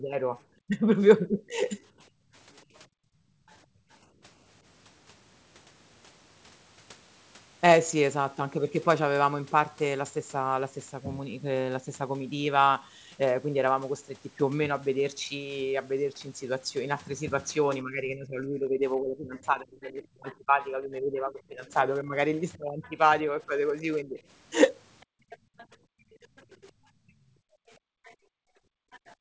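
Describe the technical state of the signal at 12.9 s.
At 12.9 s the speech is intact, with nothing wrong beyond the normal call-path band limit that leaves nothing above 8 kHz.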